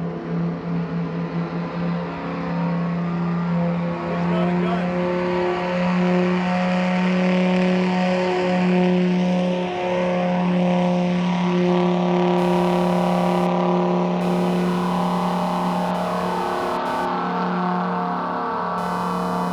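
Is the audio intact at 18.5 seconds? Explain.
No, at 18.5 seconds you're right in the middle of computer activity noise, which runs from 12.38 s through to the end at 19.52 s. The computer's processor, graphics card or mouse is pulling current in bursts, and that jolts the ground the audio circuit shares with it. You hear it as a buzzy, chirpy pulsing at roughly 500 per second, sitting around 20 dB under the sound and tracking the machine's activity rather than the audio.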